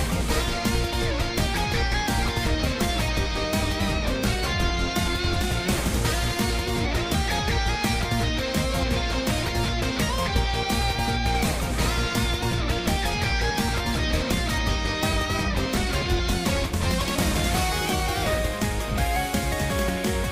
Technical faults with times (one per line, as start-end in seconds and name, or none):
none